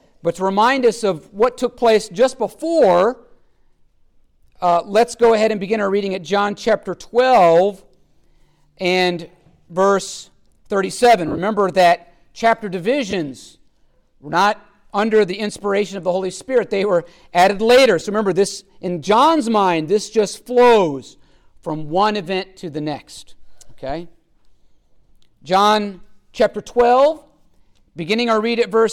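Lost LE Audio frames occur at 11.28 to 11.38 s, 13.11 to 13.13 s, and 18.00 s. The first scatters about 70 ms of gaps over 100 ms, with the longest run around 30 ms. The decoder patches each gap with the last spectrum and randomised signs, so the sound briefly smears into noise.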